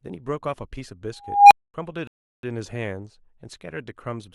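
Speech here, with two distinct problems. At 1.20 s an unstable filter takes over: a recursive filter has gone out of bounds, so a tone somewhere around 700 Hz swells over roughly 310 ms into a loud squeal, hits clipping, and then the arithmetic overflows and the output drops to silence for about 230 ms until the filter resets, with the whole event ending by 1.74 s. Then at 2.07 s there's a rebuffering stall. Playback runs dry of downloaded audio, so the speech cuts to silence and picks up again at 2.43 s exactly where it left off. Nothing is skipped, but about 360 ms of dead air is added to the timeline.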